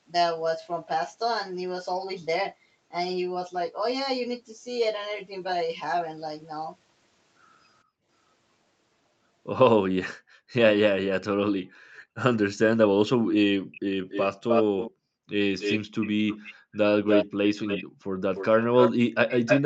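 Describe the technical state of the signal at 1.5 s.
At 1.5 s the speech is intact, with no dropout, distortion or glitch, only the expected call-path band limit leaving nothing above about 8 kHz.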